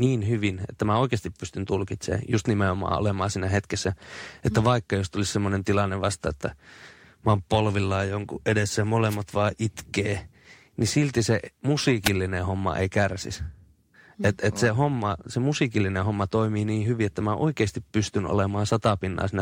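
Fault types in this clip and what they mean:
Wireless microphone noise hit: a brief burst of static as the FM radio link fades, seen as broadband vertical smears at 9.09 s and 12.04 s.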